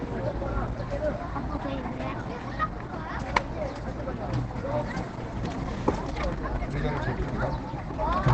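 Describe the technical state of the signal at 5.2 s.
At 5.2 s, as throughout, the sound is muffled and hoarse with nothing above 8.6 kHz, likely Opus compression in its speech (SILK) mode at a rate near 12 kbps. Unlike MP3, it swirls less: it is narrowed and rough, not hollowed out.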